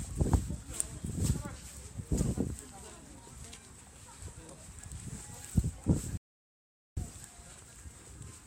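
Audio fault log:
6.17 to 6.97 s, rebuffering stall: playback starved of downloaded data and halted, so the sound cuts to silence for about 0.79 s, then picks up exactly where it stopped. Unlike a dropout, nothing is skipped; the pause simply adds time.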